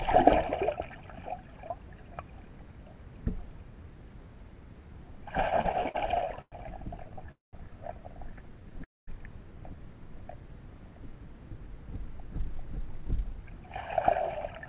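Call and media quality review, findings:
Repeated stalls (stutter), 5.5 to 7.29 s. Fifteen short gaps, longest 104 ms, about 313 ms filled in total. Jitter buffer kept running dry. Receiver extended the last sound each time. Nothing lost. Sound drags and stutters.

Call audio freeze, 7.31 to 7.55 s and 8.84 to 9.09 s. Last sound continued, then silence of 170 ms and 220 ms. Likely delayed packets emptying the jitter buffer. Playback resumes where it stopped. Nothing lost, delay grows by 214 ms and 236 ms.

Jitter buffer speed-up, 11.45 to 14.67 s. Audio plays at 105% speed, same pitch, slightly hurried. Receiver trimming short pitch-period pieces to shrink an overfull buffer. Roughly 0.15 s removed in total.

Call path band-limited to 4 kHz, which fits G.711 A-law at 64 kbps.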